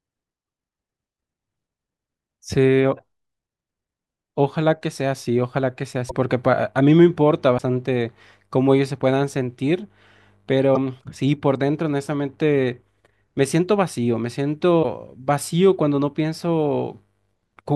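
Speech with five brief glitches at 0.47 s, 6.09–6.11 s, 7.57–7.60 s, 10.74–10.77 s and 14.82–14.85 s: a skip forward, then a chirp or noise burst. These likely come from a broken MP3 bit reservoir, with cut frames fitting 24 ms framing, showing as short vertical broadband smears or gaps and abrupt waveform discontinuities.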